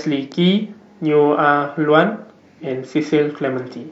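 No technical fault can be heard anywhere in this short speech recording, and the signal stays steady and intact throughout.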